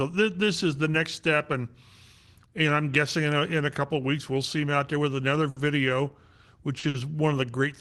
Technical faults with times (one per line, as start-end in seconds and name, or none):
5.49-5.58 short stall from a late packet
6.79-6.96 short stall from a late packet